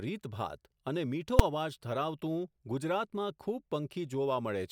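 A single sharp bang cuts through the speech at 1.39 s. It is the invalid numbers at full scale fault. A calculation produced infinite or invalid values, which were forced to the largest value the output can hold, so the signal was pinned at full scale for about 5.3 ms, a span that fits a 256-sample processing block. With so short a block, the jump onto full scale and back off merges into one loud bang.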